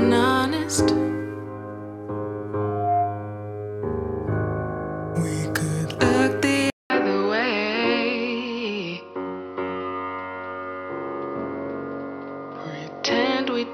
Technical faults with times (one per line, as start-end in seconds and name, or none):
2.61-3.41 loudspeaker feedback squeal
6.70-13.74 input switched to a poorer device